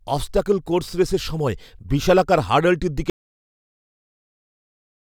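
At 3.10 s, right after "রেসের সময় বিশালাকার হার্ডলটির", the speech cuts off mid-flow and the clip falls into silence that runs to the very end, about 2.0 s in all. No room tone or background remains, only flat silence, so whatever followed is lost. This is an audio dropout to silence, likely caused by the input being disconnected, a failed link or a stray mute while the recorder kept writing empty samples.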